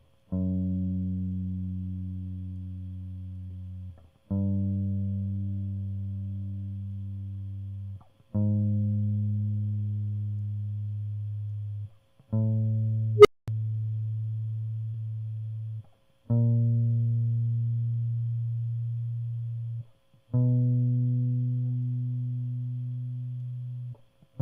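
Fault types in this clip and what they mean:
short concealed packet loss: about 20 ms of music went missing near 3.47 s and 14.91 s; the receiver continued the preceding sound, leaving brief smears.
unstable filter: a recursive filter diverged at 13.16 s; a tone near 400 Hz swells over 87 ms into clipping, then 229 ms of silence follows.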